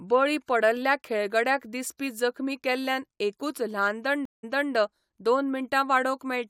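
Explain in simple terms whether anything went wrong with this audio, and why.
The connection dropped and the player had to reconnect, a stream reconnect, at about 4.25 s, just after "जखमी केल्ल्यान एकूच ल्हान". The speech cuts out for about 0.18 s, then restarts roughly 0.3 s earlier, so a short stretch repeats, ending around 4.73 s.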